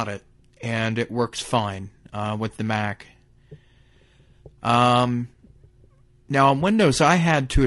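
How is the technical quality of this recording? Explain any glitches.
The recording is held back by codec damage across the whole speech clip. The likely cause is low-delay AAC compression, AAC-ELD, at a rate that sounds consistent with about 32 kbps. Its short frames capture pitch harmonics poorly, so the voice sounds rough and grainy, with noise filling the gaps between harmonics and a thin, synthetic-sounding top band throughout.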